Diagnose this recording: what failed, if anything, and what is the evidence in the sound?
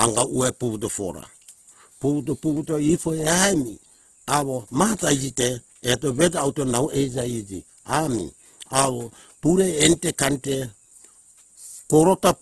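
The codec stage failed, most likely through Opus compression squeezed hard in its music (CELT) mode. The damage runs through the whole speech clip: nothing sounds above 12.2 kHz, and the speech has a rough, grainy, noisy texture rather than swirling. CELT keeps each band's energy, but with so few bits it refills the detail with folded or noise-like content. That fits a very low bitrate, around 12 kbps.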